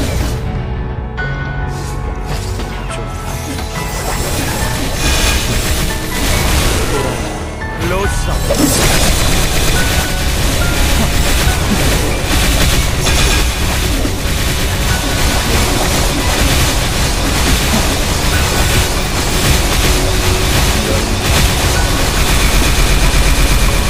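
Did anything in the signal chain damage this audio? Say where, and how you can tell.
Yes. Between 5.87 and 7.04 s the driver's ring buffer suffers buffer tearing: the writing program and the hardware read pointer have slipped and cross inside each period, so a small slice of every buffer replays audio from the previous lap, only a few milliseconds old, with hard joins on either side. Those joins recur at 345 Hz, which fits a 128-sample buffer, and they produce a steady robotic buzz riding on the sound for that stretch.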